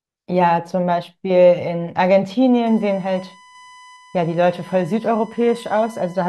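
A speech recording with USB whine entering at 2.66 s and running to the end, a steady 1 kHz tone sitting roughly 25 dB below the speech. The pitch matches the 1 ms frame rate at which the USB bus draws current, leaking in through power or ground. Unlike mains hum, which is low and tied to 50 or 60 Hz and their harmonics, this is a high, thin tone locked exactly to 1 kHz.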